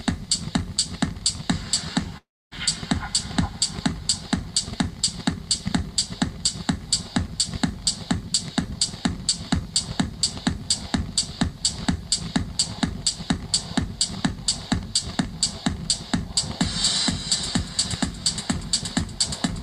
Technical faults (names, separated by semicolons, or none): long network dropout